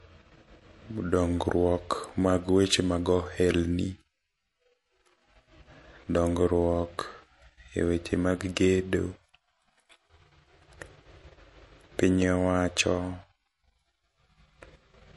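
From start to finish the speech carries plainly audible MP3 compression damage. Nothing is left above about 11.3 kHz, so sibilants sound dull and clipped, while the quieter detail swirls with a watery, chirping texture as weak frequency lines drop in and out between frames. This is likely a low-bitrate encode, consistent with roughly 48 kbps. A spectrogram shows a hard ceiling near 11.3 kHz and scattered, flickering holes in the upper bands.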